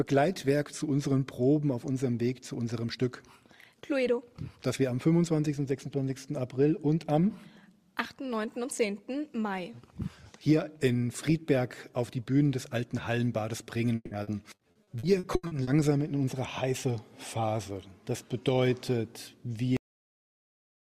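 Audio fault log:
13.95–15.70 s, repeated packet loss (robotic sound): ten separate gaps, the longest 160 ms, are patched by stretching the preceding sound, so about a third of this stretch is filler. The rapid chain of repairs, not one isolated dropout, gives the choppy, robotic texture.
19.77 s, cut-off end: the audio stops mid-sound and falls straight to digital silence for the final second, with no decay or tail. The final buffers never reached the output, which sets it apart from a fade-out or a natural ending.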